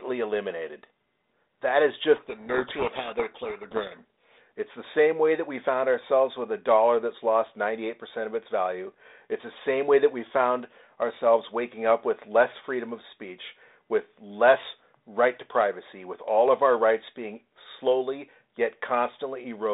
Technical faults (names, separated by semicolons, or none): codec payload misread